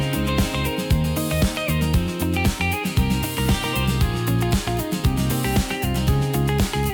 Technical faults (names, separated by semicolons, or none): none